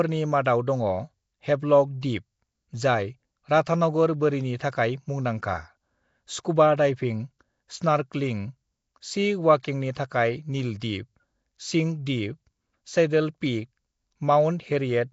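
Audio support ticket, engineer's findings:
Nellymoser compression, throughout. Speech carries a rough, hissy halo and a smeared, underwater quality; codec damage plainly audible, nothing above 7.7 kHz. Likely cause: Nellymoser Asao, at a rate that fits a 32 kbps stream. Coarse fixed bit allocation per block leaves weak bands with no bits, so they are refilled with noise.

Pre-echo at 2.01 s, just before "दिप जाय राधानगर बोरिनि", 9.63 s, 9.95 s and 10.80–10.82 s. Brief hiss of about 14 to 20 ms runs ahead of each sharp onset, and the onsets sound softened. The transform codec spreads quantisation noise across the whole block, so noise sized for the loud attack leaks into the quiet moment before it.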